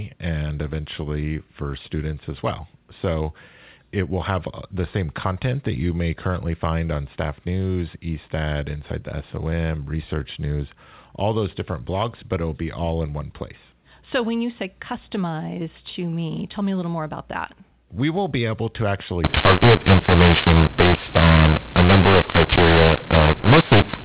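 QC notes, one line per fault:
19.24–24.04 s, mu-law and A-law mixed up: after "will be able to" the speech turns harsh and gritty, loud parts distort, and pauses fill with hiss. The mu-law telephone stream is decoded with the A-law curve, so every sample lands at the wrong level.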